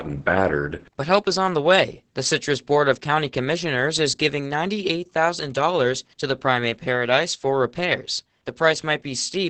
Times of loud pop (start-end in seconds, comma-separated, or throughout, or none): none